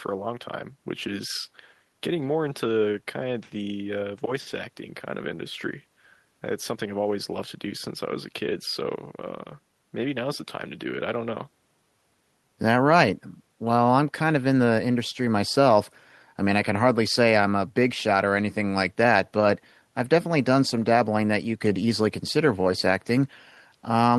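No technical faults are audible.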